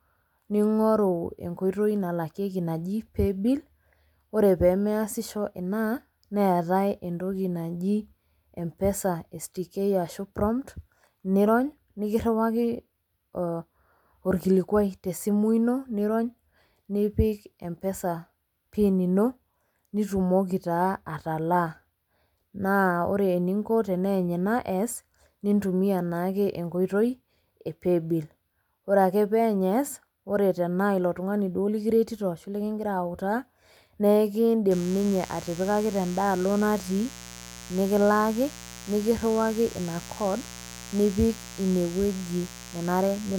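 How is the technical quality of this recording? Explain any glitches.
From 34.71 s to the end at 43.39 s, a steady raspy mains buzz sits about 15 dB under the speech, caused by switching spikes on 60 Hz mains.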